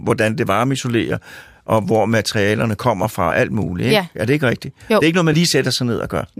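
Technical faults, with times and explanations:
3.28–3.32 s, after "og hvor materialerne kommer", and 5.30–5.33 s, after "er ikke noget": compressed frames skipped. Roughly 20 ms of audio vanishes each time, so the speech jumps ahead by that much.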